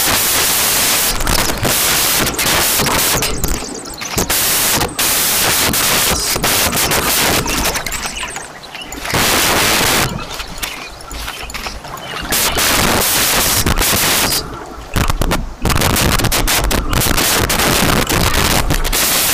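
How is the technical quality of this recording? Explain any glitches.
The technical quality is very poor, because the whole recording is affected by samples built from the wrong bytes. From start to finish, each sample has been assembled with its bytes misordered or shifted, so the rapidly changing low-order bits end up as the most significant part of each value. The result is loud, harsh broadband noise, close to white on loud sounds.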